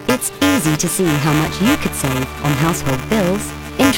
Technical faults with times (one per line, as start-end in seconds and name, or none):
0.00-3.97 buffer tearing